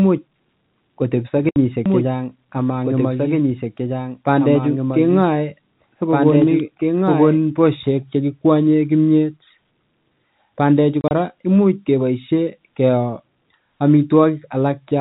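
At 1.49 s the speech drops into dead silence for 70 ms, through 1.56 s. That's packet loss filled with silence: the receiver had nothing to play, so it played zeros. The gap fits seven 10 ms packets, with hard edges on both sides.

From 1.86 s a second copy of the speech suddenly appears, running about two seconds behind and a few dB quieter. It's clean and full-band with no room tail, and it cuts out abruptly at 7.38 s. That's a doubled audio track, likely a second, slower capture path mixed in alongside the direct one.

The packet loss comes back at 11.01 s, this time scattered. About 60 ms of audio goes missing across 100 ms, up to 11.11 s, in short silent holes no longer than 30 ms each. It sounds like a quick stutter rather than one clean dropout.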